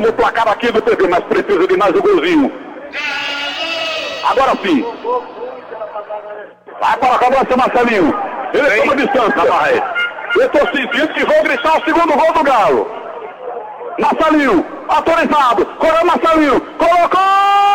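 Nothing here calls for comment: the audio runs its whole course without a single technical fault turning up along the way.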